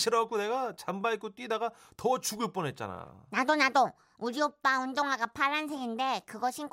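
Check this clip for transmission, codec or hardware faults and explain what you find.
Nothing turned up on a listen here: the speech comes across with no transmission, codec or hardware trouble to point to.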